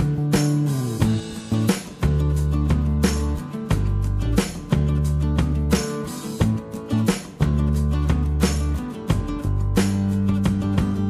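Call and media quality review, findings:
Crude rate conversion, 2.57 s to end. Gritty inharmonic fizz riding on louder and brighter passages, around 40 dB below the signal. Likely resampler interpolating linearly without an anti-alias filter; the error pattern points to a 48 kHz to 44.1 kHz conversion.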